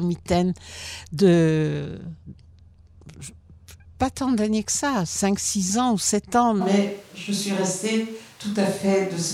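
At 6.62 s the speech turns abruptly roomy and hollow, losing its low end, and stays that way until the clip ends. The loudness barely changes, but a layer of background noise now sits roughly 30 dB under the speech. The likely cause is a switch to a distant microphone: the close microphone's signal dropped out and a pickup farther from the talker, one hearing more of the room, took over.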